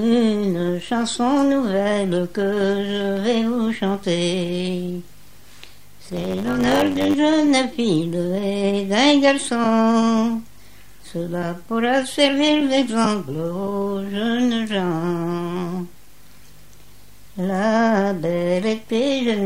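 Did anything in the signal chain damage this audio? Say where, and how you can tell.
Yes. Between 6.03 and 7.14 s there is a block size mismatch (truncated) at the driver or buffer stage. A 100 Hz buzz appears, and the sound runs about 1.07 times fast while its timbre stays put. One stage writes blocks longer than the next reads, so each block's tail is dropped, which fits a 512-sample write block. A sample-rate mismatch would also speed things up but would raise the pitch and leave no buzz.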